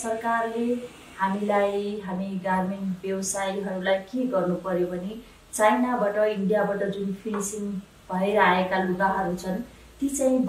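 Nothing stood out as a technical fault on listening to the audio.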